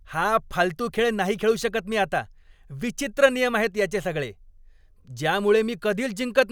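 Nothing in this recording stands out as a technical fault, so there's no problem to walk through here.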